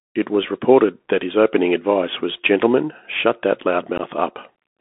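Throughout, the Bluetooth CVSD headset codec's one-bit adaptive coding, consistent with a 64 kbps link, confines the speech to about 250 Hz to 3.5 kHz, adding granular hiss and scratchy sibilants.

At 3.98 to 4.01 s, just after "shut that", unconcealed Bluetooth headset packet loss drops a couple of packets, leaving an abrupt hole of about 15 ms.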